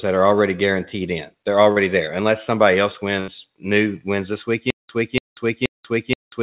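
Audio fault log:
1.72–1.79 s: short concealed packet loss. About 40 ms of the call arrived too late to decode. The receiver extended the preceding speech to bridge it, giving a brief smear. A spectrogram shows a short stretch of smoothed, continued sound with a soft seam at each edge.
4.70 s to end: stutter with silent gaps. A 287 ms fragment repeats every 477 ms with about 189 ms of digital silence between, likely a stalled stream replaying its last buffer. The waveform shows identical blocks separated by near-flat silent stretches. The spectrogram, capped at 4 kHz by the G.711 call path, shows matching columns with blank gaps.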